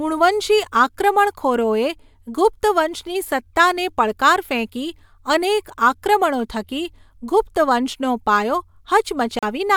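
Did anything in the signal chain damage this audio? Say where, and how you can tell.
Yes. Speech cuts to silence from 9.39 to 9.43 s, about 40 ms. It then resumes further along, as if it had kept playing. That points to a likely Bluetooth dropout on the wireless playback link: a couple of late audio packets were discarded.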